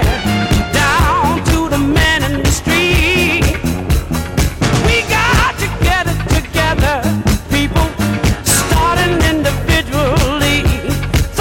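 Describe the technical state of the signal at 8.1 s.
At 8.1 s you're hearing hard clipping, and it runs through the whole clip, not just that moment. The signal's driven about 16 dB past what the stage can pass, so peaks get sheared flat. Around a tenth of the samples are hitting the ceiling, which gives a harsh, gritty fuzz on anything loud.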